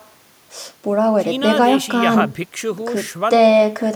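Listening carefully to the speech, nothing stood out as a technical problem at any point.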